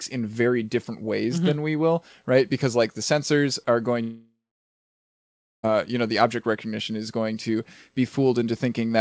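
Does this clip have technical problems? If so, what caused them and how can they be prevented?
Yes. A long network dropout runs from 4.02 to 5.65 s, between "the sensors are going" and "you know the object". The likely cause is a gap in packet arrival of about 1.6 s. The receiver stretches the last sound into a brief fading buzz, then leaves roughly 1.3 s of silence, and the audio resumes with that stretch missing. On a waveform this looks like a short decaying tail followed by a flat line. On a spectrogram, smeared, fading bands give way to an empty gap. Throughout, the call codec path shows nothing above 8 kHz, consistent with G.722. Prevention: use a more stable network connection, such as wired rather than congested Wi‑Fi, and enable forward error correction or redundancy so short losses can be recovered.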